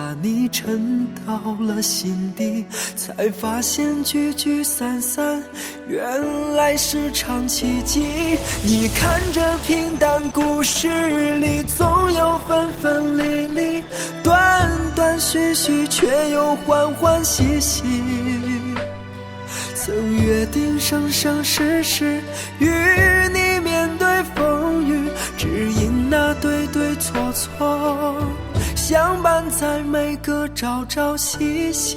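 From 7.99 s to 13.99 s the quality abruptly drops with heavier codec artefacts, without any gap: an adaptive stream dropping to a lower bitrate, consistent with Opus falling from about 64 to 16 kbit/s.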